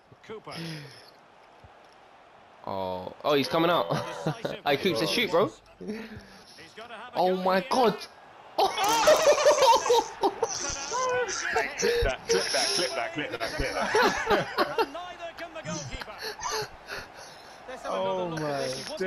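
At 2.87 to 2.95 s and again at 13.35 to 13.43 s there is a short stall from a late packet. Each time a packet arrived late, the jitter buffer ran dry, and the receiver filled the gap by stretching the last sound, 43 ms the first time and 42 ms the second, then resumed where it left off. Nothing is lost, but the sound briefly hangs with a faint buzzy, dipping quality, and everything afterward runs that much later.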